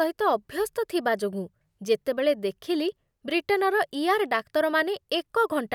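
No technical faults can be heard anywhere in the speech. There is nothing to point to at any moment in the audio.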